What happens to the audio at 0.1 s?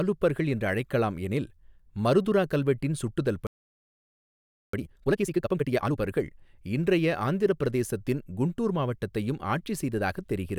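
At 0.1 s the audio is intact, with no fault or disruption to the speech at that point.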